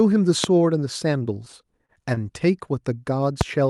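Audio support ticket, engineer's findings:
Loud pop at 0.44–0.46 s, peak about 20 dB above the signal. A second loud pop at 3.41–3.43 s, about 15 dB above. Likely cause: a voltage step from a connector, switch, static or driver glitch, shaped by the downstream circuits into a single sharp thump. Speech continues underneath. Waveform: an isolated spike towering over the surrounding level. Spectrogram: a thin full-height vertical line at each time.

Repeated stalls (stutter) between 1.34 and 2.27 s. Eight stalls in which the receiver's jitter buffer ran dry because packets arrived late or too slowly. Each gap was bridged by continuing the last sound, totalling 109 ms, with the longest at 30 ms. Nothing is dropped, but about 12% of that span is filled-in audio, so the speech drags. Spectrogram: short smeared, frozen-looking patches. Waveform: brief repeated segments.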